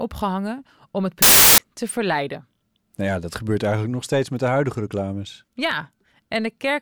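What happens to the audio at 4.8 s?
Nothing goes wrong at 4.8 s; the speech continues intact through that moment with no dropout, click or distortion.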